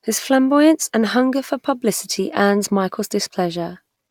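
Nothing in this recording stands out as a technical fault, with no glitch, dropout or break anywhere in the speech.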